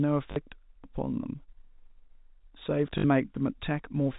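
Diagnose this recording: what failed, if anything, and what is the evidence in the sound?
The network dropped packets, and the receiver covered them by repeating the last packet. You can hear short robotic stutters at 0.32 to 0.36 s and 2.98 to 3.04 s, about 40 and 60 ms, which fits two and three 20 ms packets. The replayed chunks seldom line up with the pitch, and the runs buzz. The G.711 telephone band is clear throughout.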